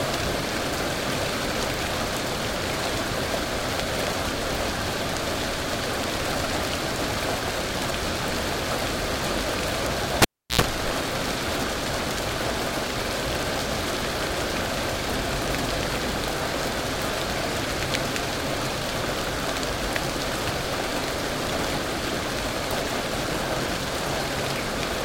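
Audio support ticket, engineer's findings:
Cable pulled and plugged in at 10.22–10.61 s: live lead unplugged and reinserted. Pop, about 346 ms of near silence, 91 ms of 60 Hz mains buzz as the plug tip touches first, second pop as the sound returns. Check the connector and cable seating.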